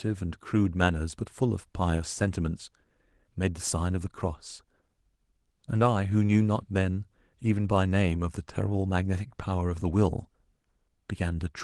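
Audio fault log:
No faults found in the speech, which carries only the ordinary coding character of a WebRTC call path.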